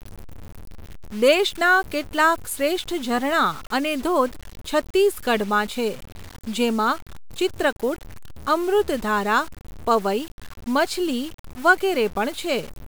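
The speech in this clip was likely reduced to a very low bit depth without dither and simply truncated, with the coarse steps pointing to something like 6 bits. Because the rounding error tracks the signal instead of being spread as steady hiss, the whole recording carries a grainy distortion that shifts with the speech, sitting only roughly 20 dB below it. Quieter passages turn gritty, and the faintest tails sputter between neighbouring steps or fall to silence.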